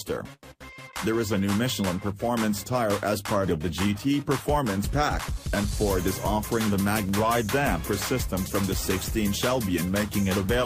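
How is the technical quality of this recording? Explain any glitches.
One glitch stands out. From 6.26 to 7.37 s, CD scratch ticks: a disc blemish defeats error correction once per revolution, so the player patches samples, leaving five sharp, sub-millisecond ticks.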